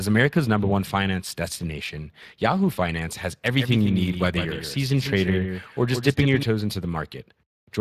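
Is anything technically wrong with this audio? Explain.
Yes, there are two faults.

Speex codec damage runs through the whole clip and is plainly audible. Speex is a CELP speech codec that models the voice from a limited budget of excitation bits, and at this rate, which fits roughly 22 kbps, the shortfall comes through as a noisy, hoarse texture on the speech. Above 8 kHz the codec sends no real detail, only shaped noise-like fill, so the top band sounds grainy rather than crisp, and nothing at all remains above 15.3 kHz.

A doubled audio track appears from 3.45 s to 6.43 s. A second, full-band copy of the speech trails the original by about 150 ms at about 5 dB lower. It has no decay or room colour, so it sounds like a distinct repeat rather than reverberation, and it switches on and off abruptly at those two points. The likely cause is the same audio being captured again through a slower path, or an edit leaving two out-of-step copies in the mix.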